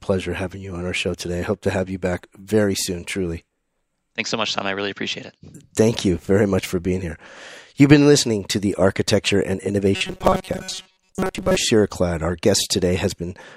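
Robotic sound from repeated short buffers runs from 9.96 to 11.58 s of this speech. For that stretch the voice collapses into a rigid, metallic buzz at 188 Hz that still loosely traces the words. This is likely a playback path starved of fresh audio, filling the gaps by looping a tiny slice over and over. A 188 Hz buzz fits a repeated chunk of roughly 5.3 ms. Most of the real signal in that span seems to be skipped.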